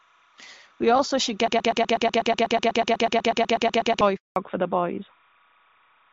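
A faint chirping warble runs behind the speech for the whole clip, sitting roughly 35 dB below it and flipping between tones near 1 and 2 kHz. This is timecode bleed: linear timecode, fitting 30-frame code, leaking in from a neighbouring track or cable as a square wave.

Right after "also should", from 1.48 to 4.01 s, the same 123 ms fragment repeats back to back 21 times, a stuttering broken-record loop. The likely cause is a stalled player, encoder or stream resending its last held piece, so the speech meant for that stretch is gone.

From 4.16 to 4.36 s the voice dies away and a 200 ms silence follows. This is a handover gap: the call switched networks, and no speech frames arrived during the switch, so whatever was said then never reached the listener.

From 4.36 s to the end, the voice turns duller and rougher, with nothing above 4 kHz. This is a fallback to narrowband, which points to the call dropping from HD Voice, AMR-WB at 12.65 kbit/s, to AMR-NB at 12.2 kbit/s.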